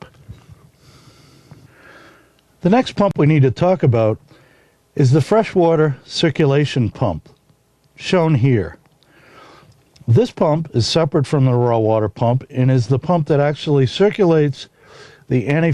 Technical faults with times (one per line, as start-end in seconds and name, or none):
none